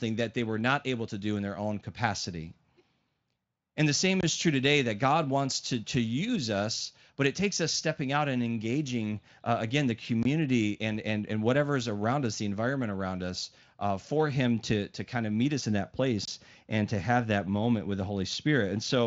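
Gaps between chunks at 4.21, 10.23 and 16.25 s: every 6 s the speech stops for about 23 ms, as if each chunk started late, though the Speex coding stays clean.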